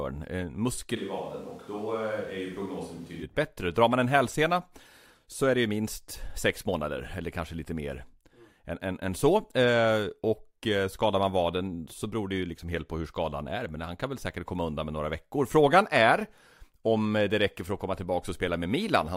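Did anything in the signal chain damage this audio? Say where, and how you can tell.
Yes. A switch to a distant microphone runs from 0.98 to 3.22 s: the speech abruptly turns roomy and hollow, loses bass, drops about 5 dB, and background noise rises to roughly 30 dB below the speech. The likely cause is a close-microphone failure at the analogue capture stage, with a farther microphone filling in.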